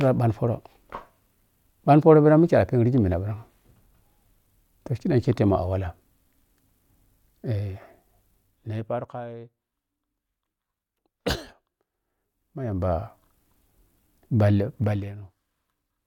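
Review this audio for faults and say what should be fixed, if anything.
A fast ticking rides on the speech during three level moves: 8.32–9.28 s, falling about 20 dB, 11.88–13.04 s, rising about 20 dB, and 14.8–15.16 s, falling about 15 dB. This is zipper noise. The gain jumps in 1 dB steps, or 2 dB steps in the last move, about 30 times a second. Each jump leaves a small click. To prevent it, interpolate the gain per sample or ramp it across each buffer instead of applying it in whole steps.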